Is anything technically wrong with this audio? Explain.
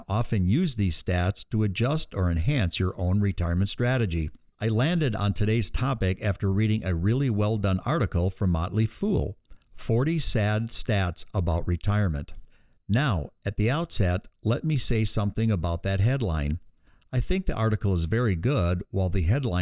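No, nothing technically wrong is audible anywhere in this speech recording.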